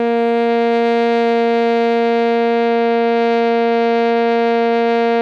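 A music clip, with nothing technically wrong with it.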